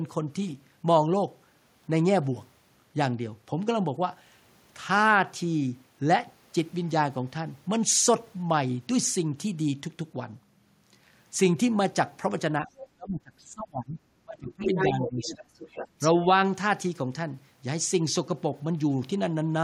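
Speech suppressed in double talk hits this speech recording at 12.6 to 12.68 s with a slight dip, then much harder at 12.95 to 13.99 s and 14.24 to 15.39 s, where the talker drops by roughly 25 to 30 dB and nearly vanishes. The echo canceller, likely unable to tell the local talker from loudspeaker echo while both sides spoke, turned everything down together. The other side's voice leaking through appears as a faint scrap around 12.78 to 12.87 s, far below the talker, and then from 14.61 to 16.09 s at almost the talker's level. It is residual loudspeaker sound that the canceller likely failed to remove from the microphone signal.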